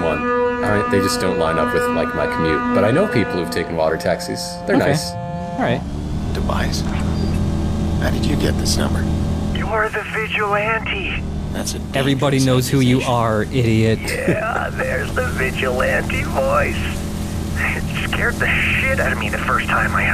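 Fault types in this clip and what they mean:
No faults can be heard anywhere in the signal.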